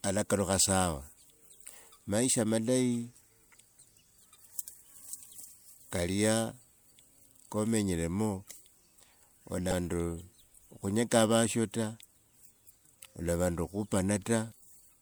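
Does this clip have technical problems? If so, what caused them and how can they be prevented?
Yes. Damaged data in a compressed stream occurs twice in this speech clip, from 9.69 to 9.73 s and from 14.49 to 14.53 s, each a short chirp or blip about 40 ms long. At those points bytes in the encoded stream were corrupted, so the decoder misread or discarded the affected frames, lost its sync, and had to search for the next valid frame header. To prevent it, deliver the stream over a checked transport and verify file integrity with checksums before decoding.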